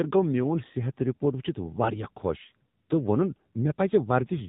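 Speech passed through the AMR narrowband mobile codec across its whole length, the low-rate AMR-NB coder of 2G and 3G phone calls. Its 8 kHz sampling removes everything above 4 kHz, so the voice sounds boxed in and muffled. The level of damage fits a 7.4 kbps mode: with only a few pulses per 5 ms subframe driving the vocal-tract model, the voice comes out plainly buzzy and synthetic.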